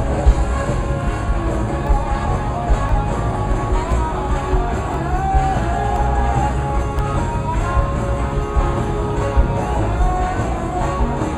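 From 1.87 to 6.99 s there are periodic USB or driver dropouts. Something stalls the audio path every 1.02 s, and each time a sliver well under a millisecond is replaced by silence. About seven evenly spaced ticks result, heard only against signal.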